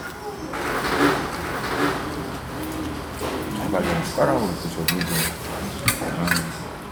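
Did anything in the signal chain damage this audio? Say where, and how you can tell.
Yes. From 1.04 s to 3.70 s there is a doubled audio track: every event is followed roughly 0.7 s later by an identical copy, around 5 dB quieter, with the full bandwidth intact and no reverberant tail or room colouring. On a spectrogram each transient has a twin shifted right by the same fixed gap. On the waveform the copy appears and vanishes with hard edges at both ends. The likely cause is a duplicate path at the driver or buffer stage, or an edit that layered two misaligned copies.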